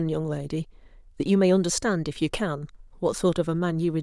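No technical faults can be heard anywhere in it.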